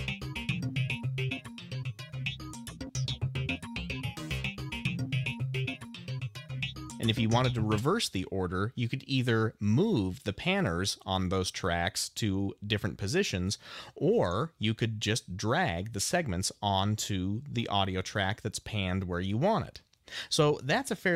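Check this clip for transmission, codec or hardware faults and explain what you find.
No transmission, codec or hardware fault can be heard anywhere in the audio, and the signal stays continuous and steady throughout.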